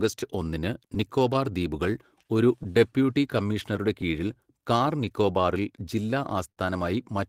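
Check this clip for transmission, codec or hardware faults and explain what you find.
Yes, there are transmission faults, all timing-related: a clock mismatch running through the whole clip, two clusters of small concealed gaps, a long run of stretching corrections, and one brief stall near the end.

Clock drift between sender and receiver affects the entire clip. The sending side's clock runs slow, by something like 4 percent, so audio arrives a little slower than the receiver plays it out. The jitter buffer keeps draining, and the receiver has to make up the shortfall. Unlike a single network dropout, the disturbance isn't tied to one moment. Small timing wobbles recur at uneven intervals from start to finish, which shows the cause is a steady rate mismatch rather than packet loss.

Scattered short gaps appear from 0.19 to 1.43 s and again from 3.33 to 4.87 s. In each stretch, about five packets were lost or late, each hole no longer than roughly 10 ms and together only around 40 ms. 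The receiver bridged each one by continuing the sound just before it, so nothing audible is removed. The speech stays clear, with brief ticks or tiny smears. Because the holes are this short and spread out, they sound like brief ticks rather than the held, buzzy note of a stall.

Repeated timing corrections run from 0.59 to 6.11 s, the receiver's response to the slow sender. It keeps inserting small repeated slices, playing the speech at about 97% speed and adding around 150 ms in total over the span. Every edit lengthens the audio and none shortens it, but the edits are unevenly spaced. The result is a slightly unsteady, dragging tempo with occasional faint hiccups, rather than the discrete clicks left by lost packets.

A short stall from a late packet occurs at 6.52 to 6.60 s. One packet missed its playout time, the buffer ran empty, and the receiver held the last sound for 50 ms until the packet arrived. 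Playback then resumed from the same point with 50 ms of added delay. Nothing is skipped, but one sound lingers too long with a slight buzzy or dipping quality. That single sustained hold sets it apart from the brief, scattered patches of the gap clusters.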